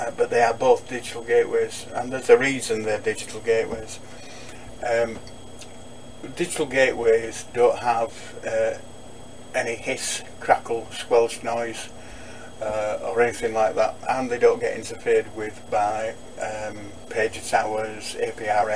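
No technical faults are audible.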